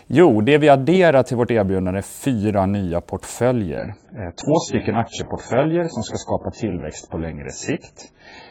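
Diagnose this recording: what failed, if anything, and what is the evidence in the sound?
From 3.78 s to the end at 8.51 s the speech abruptly turns dull and swirly, with nothing above 7.7 kHz and no gap at the switch. This is an adaptive stream at a lower bitrate: the network slowed, and the player moved to a lean encoding, consistent with AAC dropping from about 96 to 12 kbit/s.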